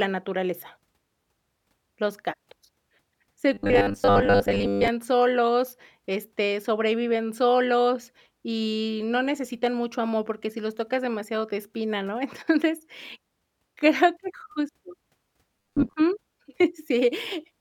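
Robotic sound from repeated short buffers appears at 3.54 to 4.88 s, just before "solos este sobreviven solos", and again at 15.60 to 15.94 s. Delayed audio is likely the cause: a 10 ms fragment loops in place of missing sound, for most of the first stretch and about half the second, leaving a rigid, metallic 100 Hz buzz.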